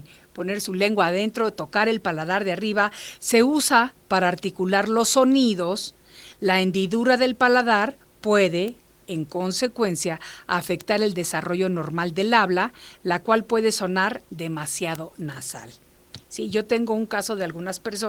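Bit error spikes land at 8.68, 10.81 and 14.95 s in this speech: a single flipped bit in memory or on a digital link throws one or two sample values off by a power of two before they snap back, giving a sharp, broadband tick unrelated to the speech.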